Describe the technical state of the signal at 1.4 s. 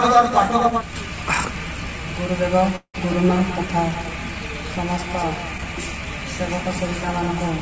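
At 1.4 s the audio is intact, with no fault present, only the steady band limit of the call path, which fits a G.722 wideband codec with nothing above 8 kHz.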